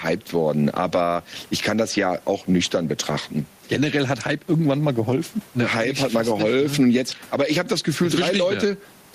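Gain pumping runs through the whole speech recording. The swing is around 10 dB. Loud and soft parts sit close in level, so everything sounds squashed. The likely cause is gain set far too high, with a fast limiter pulling it down. There is also room noise, about 36 dB below the speech.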